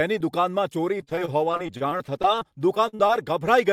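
Packets in this speech clip were repeatedly lost or arrived too late between 0.85 and 3.11 s, producing repeated packet loss with a robotic sound. Each missing stretch was patched by extending the preceding sound, so roughly a fifth of that span is concealed material rather than real audio. The holes come in quick succession, the longest about 47 ms, so the speech turns choppy, with small pieces audibly dropped out.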